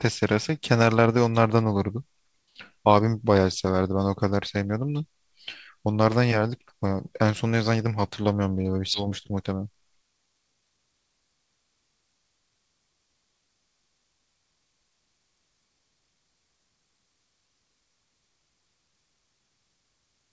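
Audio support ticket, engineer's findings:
Skip ahead at 8.94 s: speech jumps forward with no gap, about 0.7 s of material missing, both sides spliced almost directly. Probable component: jitter buffer overflow, discarding queued audio while later packets were already waiting.

Jitter buffer speed-up, 9.03 to 10.94 s: speech runs at 111% speed, pitch unchanged, sounds hurried. Receiver trimmed short pitch-period pieces, about 0.2 s total, to drain excess buffered delay. Path is G.722 at 64 kbps; band ends at 8 kHz.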